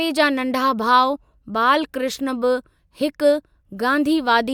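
No technical faults are audible.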